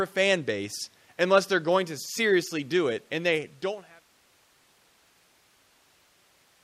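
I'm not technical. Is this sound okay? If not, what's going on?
Yes, the recording is technically sound, with nothing wrong to point to, and the volume that gently dies away from around 3 seconds until about 4.11 s is an ordinary smooth fade-out, as an editor would apply.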